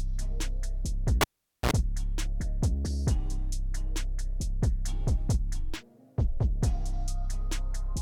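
Cable pulled and plugged in at 1.21 to 1.71 s: a pop, about 450 ms of near silence, then 55 ms of 60 Hz mains buzz as the plug's tip touches, then another pop.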